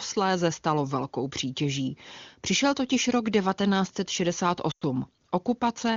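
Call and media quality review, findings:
Speech dropping to near silence, 4.71 to 4.84 s, returning weak and rough. Probable component: AMR-WB decoder, lost AMR speech frames. About 100 ms of frames failed checksum, which fits a run of about five frames. Decoder repeated the last good pitch and vocal tract settings at falling gain; wideband concealment fades fast. HD Voice path at 23.85 kbit/s carries clear speech around the gap.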